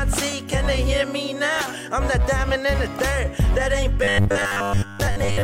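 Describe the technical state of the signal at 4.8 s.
At 4.8 s the sound is a rigid, metallic 100 Hz buzz, robotic sound from repeated short buffers spanning 4.03 to 5.43 s, likely caused by late audio forcing repeats of a roughly 10 ms buffer for most of that stretch.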